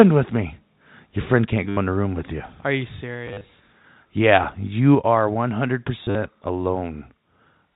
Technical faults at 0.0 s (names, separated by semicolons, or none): microphone overload; microphone volume stepped down